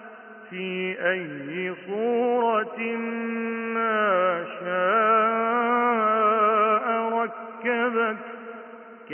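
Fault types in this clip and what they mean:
No faults can be heard.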